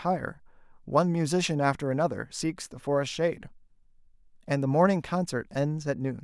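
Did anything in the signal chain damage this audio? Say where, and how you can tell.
No, nothing in the signal chain damaged this audio.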